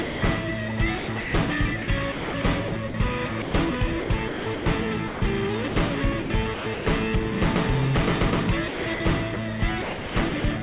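From 0.02 to 0.22 s, the opening 200 ms of sound is dropped by the voice detector and replaced with flat, steady noise. The sender's detector likely treated the start of the sound as background, so the receiver generated comfort noise until transmission resumed. On a waveform this is a low, even band with no envelope. A spectrogram shows smooth, featureless noise where the onset should be, and the real sound appears abruptly after it.

Between 0.98 and 6.86 s, the sound is chopped by the voice detector, which repeatedly switched sending off and on. About 1.7 s in total is swapped for comfort noise, most likely because quieter passages fell below the detector's threshold. The same thing recurs from 8.68 to 10.44 s, where about 0.66 s is lost, again likely through the detector gating out softer sound. Both stretches sound choppy. A waveform shows the envelope cut into blocks with flat, uniform gaps. 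A spectrogram shows structured content alternating with patches of smooth, textureless noise, with hard vertical edges at each switch. Throughout, nothing appears above 4 kHz, which fits the narrowband G.711 call path.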